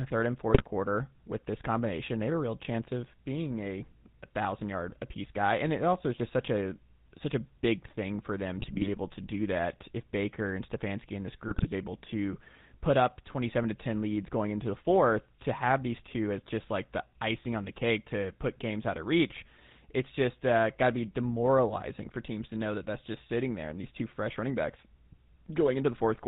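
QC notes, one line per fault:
throughout: GSM full-rate codec. Buzzy, gravelly speech with nothing above 4 kHz, from pulse-excited vocal-tract coding, which fits a 13 kbps full-rate coder.
0.48–0.67 s, 8.58–8.89 s, 11.48–11.67 s: GSM bit errors. Squawks, pops and gargling as corrupted filter, pitch and gain values distort frames, pointing to a bit error rate of about 2%.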